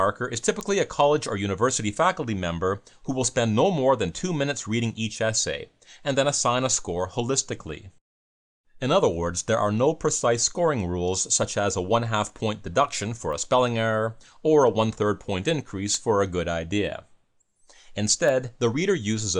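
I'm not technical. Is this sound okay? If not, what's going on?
No. Bit error spikes at 0.61, 13.33, 15.95 and 18.29 seconds: each is a single sharp tick where one or a few digital values briefly flipped, jumped far off, then snapped back.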